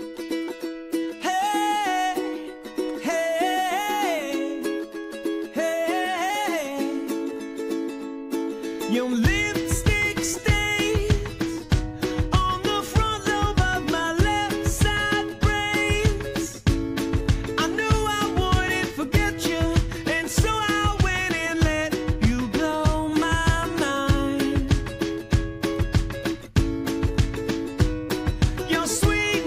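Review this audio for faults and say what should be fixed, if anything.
At 28.76 s there is a small jump in the sound, where a dropped buffer (overrun) likely cut out a few milliseconds, around 7 ms, and joined the two sides directly with no gap of silence. On a waveform this shows as a sudden discontinuity where the trace steps to a new level, and on a spectrogram as a thin vertical broadband line at that instant. Reading the input promptly enough, with a larger buffer or higher-priority capture thread, prevents this.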